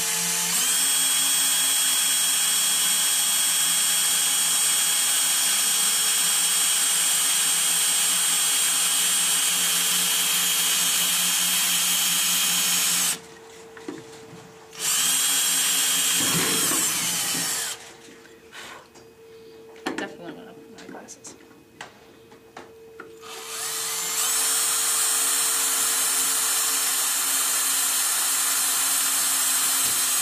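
No technical faults can be heard anywhere in the audio. Nothing in how it was captured or delivered stands out to the ear.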